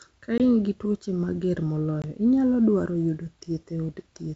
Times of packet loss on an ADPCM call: 0.38-0.40, 2.02-2.05

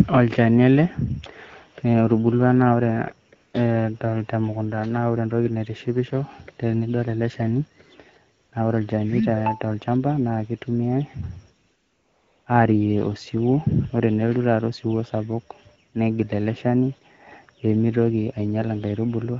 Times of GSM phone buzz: none

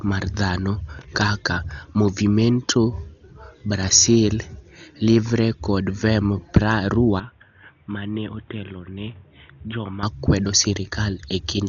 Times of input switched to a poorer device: 7.20-10.03

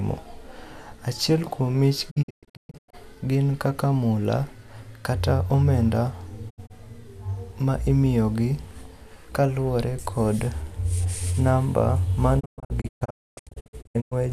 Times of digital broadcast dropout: 2.09-2.95, 6.49-6.72, 12.39-14.13

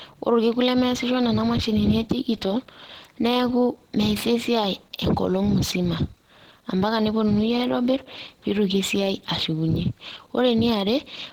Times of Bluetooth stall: none

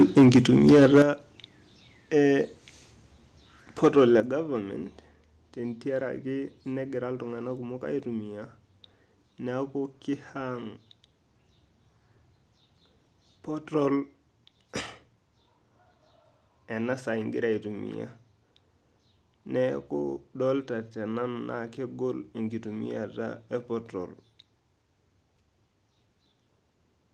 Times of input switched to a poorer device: none

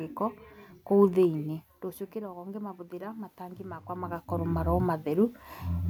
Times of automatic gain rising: 2.12-4.76

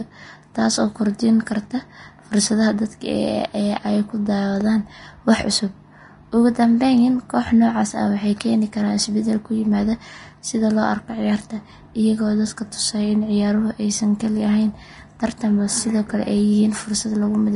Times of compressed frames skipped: none

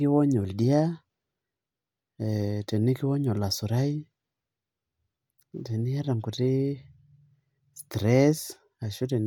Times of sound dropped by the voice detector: none

